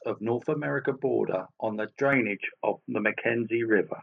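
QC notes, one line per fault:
2.13–4.03 s: likely input switched to a poorer device; speech dulls abruptly, spectrogram empty above 3.3 kHz, waveform level shifts about 5 dB, no gap.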